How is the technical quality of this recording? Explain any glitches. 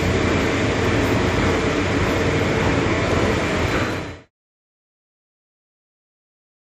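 The signal shows no technical faults; the only level change is a deliberate smooth fade-out beginning around 3.5 s and reaching silence at 4.31 s, with no click or hard edge.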